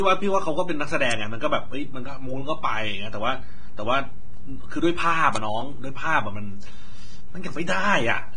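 Throughout the speech, a DC offset shifts the waveform off zero. It is inaudible, but it takes up headroom and shows as constant energy at the bottom of the spectrum. The audio also has nothing above 9.7 kHz and carries codec artefacts. This is likely low-bitrate audio saved at a high bitrate, which fits a low-rate Vorbis encode later wrapped in high-rate MP3. At 1.11 s and again at 5.36 s, a sharp snap or tight cluster of clicks lands on top of the speech, each likely an electrical switching spike picked up by the line.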